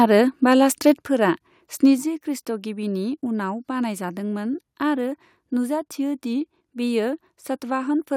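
A speech recording in which the loudest peaks at 0.00 to 0.05 s and 0.86 to 0.91 s break into a harsh crackle, likely microphone overload. The input runs about 2 dB past the converter's ceiling, so on a waveform a small fraction of samples sit as flat-topped plateaus, and a spectrogram shows broadband smearing at those instants. At 1.02 s and again at 2.04 s, voice and background both fall abruptly by about 5 dB, likely the microphone volume being stepped down by the call software in response to those hot peaks. On a waveform the envelope drops in a clean vertical step each time, and on a spectrogram the whole frequency range darkens uniformly at once.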